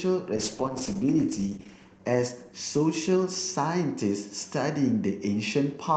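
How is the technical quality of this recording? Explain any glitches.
The recording has one clear glitch, a call bitrate drop from 0.37 s to 4.05 s. The call's bandwidth estimate fell and the Opus encoder was made to spend far fewer bits, consistent with a drop from about 64 to about 10 kbps, bottoming out for roughly 1.4 s. The speech turns coarse, watery or muffled as high frequencies are cut, then recovers to the normal 8 kHz bandwidth.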